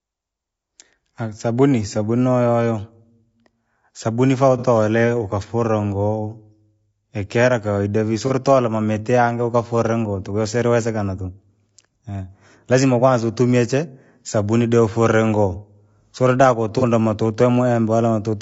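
Throughout, the speech sounds rough and grainy, with noise between harmonics, most likely low-delay AAC compression (AAC-ELD) at a bitrate around 32 kbps. At 4.58 to 4.66 s, 8.27 to 8.31 s and 16.79 to 16.83 s, AAC frame loss with concealment leaves brief smeared, phasey patches of about 60, 30 and 30 ms. These are filled from the preceding spectrum rather than dropping to silence like a dropout.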